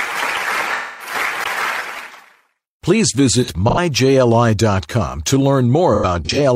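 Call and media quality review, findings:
Smeared, noisy patches at 0.73–1.14 s, 3.43–3.78 s and 5.94–6.39 s. AAC frame loss with concealment: decoder rebuilt missing frames from the last good spectrum, 256 ms lost in the first, runs up to about 100 ms in the later two.

Tick with a brief mute at 1.44 s, then playback resumes from a different point. CD skip: the laser jumped to another turn of the disc spiral.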